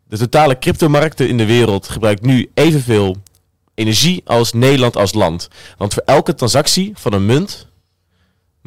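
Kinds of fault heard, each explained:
Hard clipping: a stage in the chain was driven about 10 dB past the level it could pass, so the loudest peaks, roughly one sample in twenty, were cut flat. Those squared tops add high harmonics, putting a harsh, crackly fuzz on louder syllables throughout the speech.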